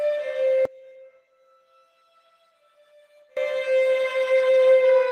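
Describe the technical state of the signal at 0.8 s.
At 0.8 s the sound sits inside a one channel inverted span from 0.65 to 3.37 s. Its level falls by about 28 dB, likely because one channel's polarity is reversed and the shared content cancels in mono. Unlike a plain dropout or gain drop, a faint difference signal lingers.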